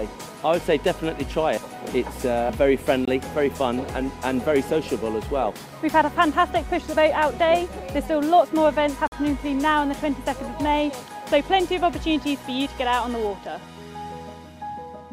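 At 3.05 s and again at 9.08 s, a gap between stream segments drops in silence, about 22 ms and then 46 ms, where 6-second segments meet with misaligned timestamps. Each sounds like a hard-edged dropout and appears as a clean vertical blank stripe, a flat line on the waveform.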